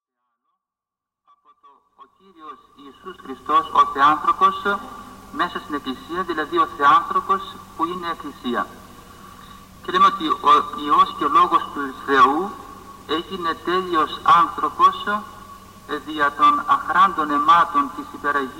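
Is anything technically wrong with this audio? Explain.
No, nothing is technically wrong: the smooth fade-in from the very beginning to 3.62 s is an ordinary editing choice, and no defect is audible anywhere in the audio.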